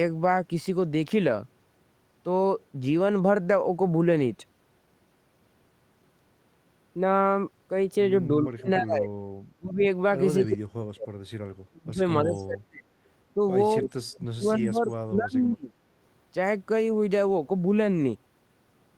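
An echo canceller likely struggling with double talk produces speech suppressed in double talk: the talker's level drops sharply, by around 30 to 40 dB, during overlap at 8.53–9.13, 9.56–9.82, 10.45–11.14, 11.67–12.02, 12.24–12.92 and 13.81–15.81 s. The longest dip lasts about two seconds. Twice, at 8.95–8.99 s and 12.35–12.44 s, the same canceller likely fails to remove the loudspeaker pickup, creating echo leak: a faint scrap of the voice, roughly 30 to 35 dB down, returns 296 ms late.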